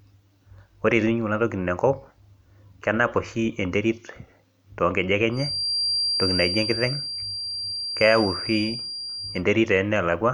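From 5.29 s to 9.45 s there's a feedback whistle behind the speech, a thin, steady tone near 4.7 kHz sitting a few dB under the voice and swelling and fading slowly in level. Likely the speaker-to-mic loop is hovering right at the edge of feedback without tipping over.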